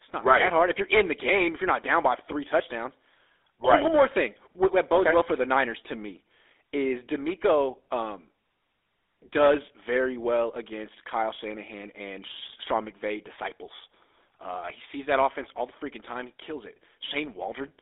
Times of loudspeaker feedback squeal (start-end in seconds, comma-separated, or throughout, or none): none